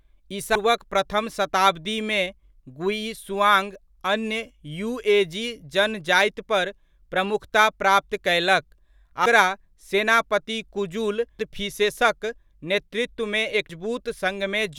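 Damaged data in the compressed stream trips the decoder at 0.55, 9.26, 11.39 and 13.70 s. Corrupted bytes make it misread frames and lose sync until it locks onto the next frame header, so each point in the speech gives a brief chirp, squawk, click or short hole.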